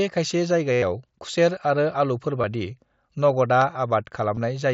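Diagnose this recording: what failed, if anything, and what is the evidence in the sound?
The radio link between headset and phone dropped voice packets, causing concealed Bluetooth headset packet loss. From 0.72 to 0.83 s, about 100 ms of buzzy, steady-level repeated waveform ends in a slight warble. Brief patches occur at 2.42 s and 4.35–4.37 s, where the receiver looped recent audio through mSBC-coded speech.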